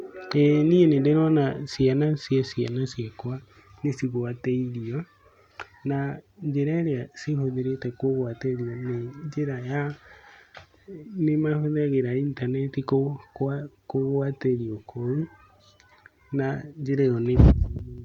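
No technical faults are audible.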